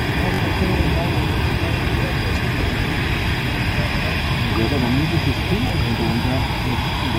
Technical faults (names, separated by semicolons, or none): repeated buffer